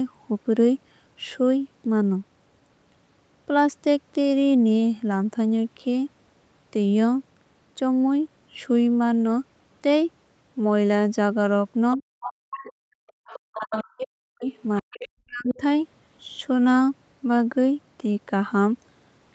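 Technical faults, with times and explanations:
11.96–15.61 s, speech suppressed in double talk: at 11.96–13.05, 13.55–14.46 and 14.81–15.61 s the talker dips by up to about 40 dB. Both sides were likely talking at once, so the echo canceller turned everything down. Unlike a dropout, the gaps follow the overlapping voice.
12.53–15.55 s, other side's voice leaking through: a second voice appears at 12.53, 13.07–13.9, 14.48–15.08 and 15.48 s, about 15 dB below the talker and about 10 dB below at 13.07–13.9 s. Far-end speech from the loudspeaker was likely left in the microphone signal. Unlike suppression, this adds sound rather than removing it.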